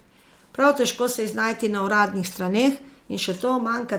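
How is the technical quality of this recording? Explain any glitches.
Listening closely, nothing in the recording stood out as a technical problem or glitch.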